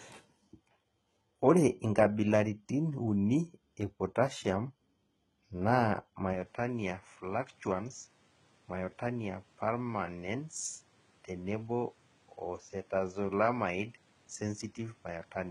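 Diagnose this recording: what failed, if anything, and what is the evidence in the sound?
Throughout, sibilants sound gritty and metallic and the treble stops at 13.7 kHz: likely heavy HE-AAC compression at the codec stage, with band replication that fits a 16 kbps stream.

From 6.33 s to the end, the sound turns duller, with nothing above 10.5 kHz, drops about 5 dB, and gains a noise floor roughly 35 dB down. The likely cause is that the input switched to a poorer device.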